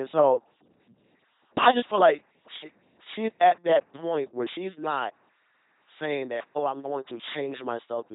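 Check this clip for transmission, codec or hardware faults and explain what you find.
The clip shows one fault, present throughout: LPC-10 vocoder coding. The speech is heavily damaged. It sounds buzzing and robotic. Each moment is rebuilt from a short filter driven by either pulses or noise, so natural voice texture is lost. Nothing remains above 3.8 kHz, which fits a 2.4 kbit/s LPC-10 link.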